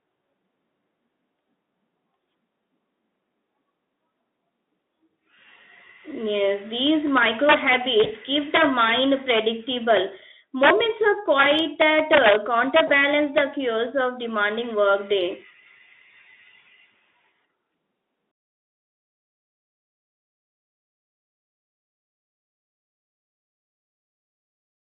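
From 6.87 to 9.39 s, gain pushed the speech about 6 dB past the integer limit, and instead of clamping, the peaks wrapped to the opposite sign. This is integer overflow, heard as harsh cracks far sharper than clipping. Inside that stretch, from 8.03 to 8.13 s, about 20 ms of audio went missing, and the speech codec's packet loss concealment extrapolated from the last pitch and filter. This produces a brief smear that fades before recovering. The overflow returns at 10.63 to 10.70 s (about 3 dB over) and at 11.39 to 12.36 s (about 6 dB over). It comes back once more from 12.76 to 13.41 s (about 3 dB over), just before "chaos of demanding", where a second concealed gap from 12.87 to 12.91 s brings another brief fading smear. The line runs through a Speex codec at 18.2 kbps, band-limited to roughly 250 Hz to 3.6 kHz, with little audible coding damage.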